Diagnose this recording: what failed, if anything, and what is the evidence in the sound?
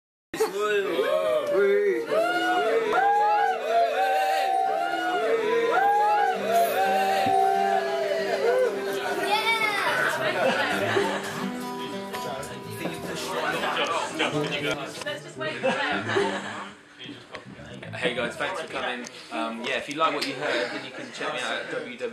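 Cut-off start at the capture stage: digital silence runs to 0.34 s, then the sound enters abruptly mid-event with no attack, because recording began late.

Damaged data in a compressed stream, at the codec or storage stage: brief blips at 2.93 s and 14.74 s, where corrupted frames threw the decoder out of sync.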